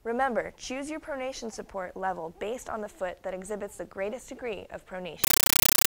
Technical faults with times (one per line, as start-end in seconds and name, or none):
5.24-5.89 compressed stream played as audio